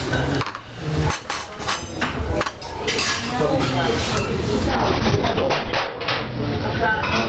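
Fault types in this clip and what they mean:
Gain pumping: The input gain was likely set far too high, with a fast limiter or compressor pulling it down on every loud event. Throughout the clip the gain swings by roughly 20 dB, leaving the audio squashed.
Call bitrate drop: From 4.71 s to the end, the call's bandwidth estimate fell and Opus was pushed from 32 kbps down to 7 kbps, its lowest rate lasting 1.17 s. The sound turns coarse and watery, and the top end narrows from 8 kHz to 6 kHz.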